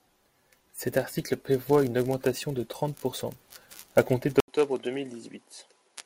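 At 4.40 s, just after "à compter", the speech drops out for 80 ms, then returns duller and about 5 dB quieter, with nothing above 11.4 kHz. A faint new noise floor sits roughly 50 dB down. The input likely switched to a poorer device.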